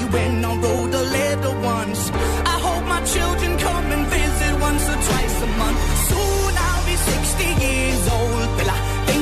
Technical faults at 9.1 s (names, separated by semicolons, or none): none